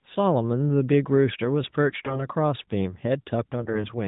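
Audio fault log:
1.90–2.25 s and 3.60–3.88 s, AMR bit errors: corrupted less-protected bits, around 7 percent, misplace the codec's excitation pulses and skew its fine pitch, gain and spectral values. The audio turns hoarse and gargly at steady level. On a spectrogram, harmonics blur into grainy noise below the 4 kHz narrowband limit, while the waveform envelope stays intact.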